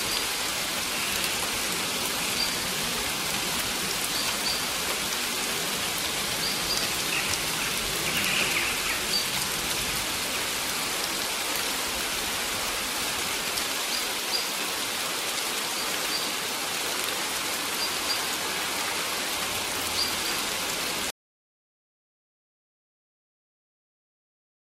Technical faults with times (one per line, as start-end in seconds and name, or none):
21.10-24.65 audio dropout to silence